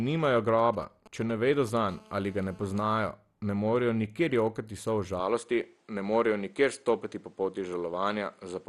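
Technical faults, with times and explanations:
Throughout: MP2 compression. Nothing reaches above 12.2 kHz, and the top of the speech sounds dull and plainly gurgling. The remaining detail has a granular roughness, with upper bands seeming to flicker in and out. This is likely MPEG Layer II coding at a low rate, with damage consistent with roughly 64 kbps. The codec divides the spectrum into 32 sub-bands and, starved of bits, drops the highest ones and quantises the rest coarsely.
0.59–1.78 s: GSM signalling bursts. A galloping dit-dit-dit pattern of brief buzzes sits about 20 dB below the speech. Its buzz rate is 217 Hz, the frame rate of a 2G handset. A nearby phone was exchanging short groups of radio bursts with the network, as happens before a call or message arrives. The audio circuitry rectified that RF energy into these clustered clicks.
1.88–3.09 s: GSM phone buzz. The intermittent bursts give way to a continuous, hard, raspy buzz at 217 Hz. 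It is rich in harmonics and about 26 dB below the speech. The handset had moved into an active call and now transmits a burst in every frame, 217 times a second. The rectified pulses become a steady tone that ignores whatever is being said.
5.20–8.68 s: input switched to a poorer device. From 5.20 s to the end, the sound narrows, with nothing above 10.5 kHz. It takes on a different tone and a new low background noise, roughly 45 dB under the speech. The change is abrupt, with no gap and hardly any level jump. The likely cause is that the system changed over to a lesser microphone or a headset's call profile partway through the recording.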